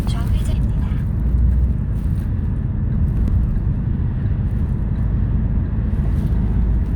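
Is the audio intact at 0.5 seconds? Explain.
No. From about 0.50 to 0.53 s, roughly 36 ms, there is damaged data in a compressed stream. Bytes in that stretch are wrong, so the decoder misreads the frames, loses sync and has to search for the next valid frame header before it can continue. The result is a short chirp, squawk, click or brief hole. Smooth loss concealment, by contrast, would fill the hole more smoothly.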